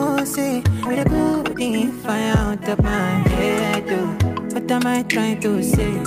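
At 0.85 to 0.87 s there is a skip ahead. About a second of audio is missing. It was dropped while later audio waited, and the two sides join directly with no gap. The sound jumps forward abruptly.

Right after, from 0.89 to 2.73 s, a jitter buffer speed-up runs at 126%. The buffer held too much audio, so short pitch-period pieces were cut repeatedly, about half a second in total. The sound hurries at unchanged pitch. A milder one follows at 3.83 to 4.99 s, at 104%, trimming a small amount. It is barely rushed.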